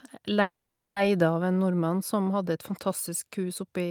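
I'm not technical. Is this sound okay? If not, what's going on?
No. At 0.41 s the speech stops and a call audio freeze sets in, lasting until 0.98 s. The last sound keeps going as a fading buzz or hiss, then goes quiet for about 0.16 s. Speech picks up again with "av en nordmann som", right where it left off. Nothing seems lost. The speech is just pushed later by about half a second. The likely cause is that data was held up on the network and the call ran out of audio to play.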